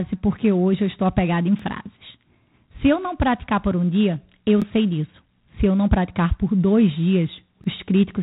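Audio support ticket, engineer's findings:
G.726 ADPCM, throughout. Harsh, rasping hiss riding on the speech and tracking its level, with nothing above 3.8 kHz. Likely component: a G.726 coding stage, with grain heavier than DECT's usual 32 kbit/s, which fits 24 kbit/s. Fewer bits per predicted-difference sample means coarser quantisation and louder noise. Distinguishing point: the noise rises and falls with the speech level, unlike a steady background hiss, and shows no swirly or watery tones like those of a transform codec.

Overlapping chunks at 1.59 s, after "eu estou apegada em"; at 4.62 s, between "por um dia eu" and "sei disso"; and at 7.64 s. Short stutter-click at each, about 23 ms replayed. Probable component: chunked processing with 3 s blocks, each starting before the previous ends. Distinguishing point: the regular 3 s spacing and the repeated audio separate this from random packet-loss glitches or dropouts, which skip audio instead of doubling it.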